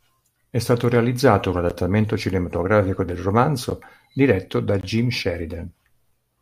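At 1.70 s, right after "stato realizzato un", the speech drops into a block of digital silence about 11 ms long, and it happens again at 3.70 s after "cinematografico del". Then at 4.81 to 4.83 s, after "diretto da", there's a longer hole of about 21 ms. Each time the output buffer likely wasn't filled in time, so zeros went out instead. The cut has no fade at either edge, so the short gaps come across as sharp ticks and the longer one as a brief pop-like dropout. The lengths fit missed 512- and 1024-sample buffers.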